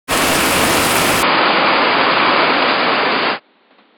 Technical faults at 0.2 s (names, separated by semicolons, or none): none